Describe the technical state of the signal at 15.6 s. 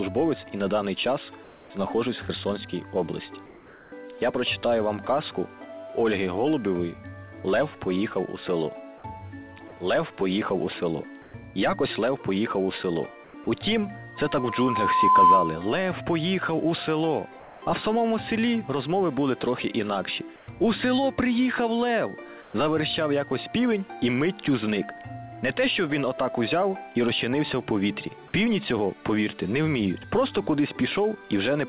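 At 15.6 s a loudspeaker feedback squeal, running from 14.16 to 15.65 s, is just ending. A microphone re-amplifying its own loudspeaker made a single 1 kHz tone swell over about a second to roughly 10 dB above the sound. A test tone would start at full level instead.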